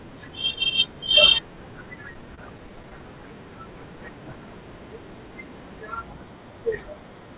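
From 1.96 to 3.02 s the speech hits repeated stalls, a stutter: packets showed up late, the jitter buffer kept running dry, and the receiver stretched the last sound about a dozen times, roughly 130 ms in all, the longest hold 29 ms. Nothing is lost, but it drags and judders, heard through the G.711-style narrowband path, with nothing above 4 kHz.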